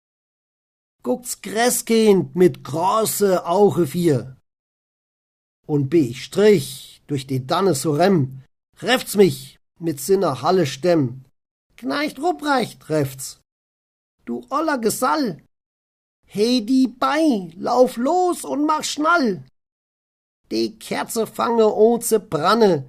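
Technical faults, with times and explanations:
throughout: clock drift between sender and receiver. The sound carries faint, unevenly spaced hiccups and a tempo that never quite settles, slightly dragging rather than rushing. The sender's clock runs roughly 2 percent slower than the receiver's, so the jitter buffer keeps draining. To avoid running dry, the receiver fills gaps with short repeated pieces, and at moments the buffer may empty briefly, leaving tiny stumbles instead of a steady flow.
0.10 to 22.69 s: repeated timing corrections. Across almost the whole stretch, playback feels held back, running at about 98 percent of its proper pace, with small catches where a fragment seems to sound twice. These are the receiver's many small insertions, all in the same direction, patching the shortfall from the slower sender. Together they add about half a second. Each one is slight, so they come through as an unsteady, faintly sluggish rhythm rather than obvious glitches.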